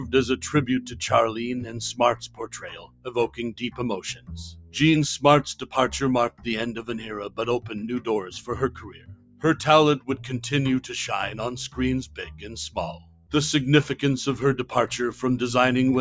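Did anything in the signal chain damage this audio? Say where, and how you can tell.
Yes. The damage happens at the call-processing stage. A noise suppressor built for speech stayed on for this material, and it runs through the whole clip. It treats steady, sustained content as noise and pulls it down, by around 15 dB at its worst. Onsets pass, but held sound and decays sink, so the level pumps and thins. The band tops out near 8 kHz from the call's microphone path, as expected.

The clearest evidence is the sound cut by the noise suppressor at 0.85–1.01, 2.15–3.1, 3.27–3.79, 4.14–4.75, 6.3–6.47, 8.7–9.44, 12.05–12.77 and 12.93–13.33 s. The first dip is shallow, about 6 dB. The rest drop by about 13 to 16 dB. The longest cuts, near 2.2–3.1 s and 8.7–9.4 s, last about 1 s and 0.7 s. The gain decision is tracking steadiness, not loudness.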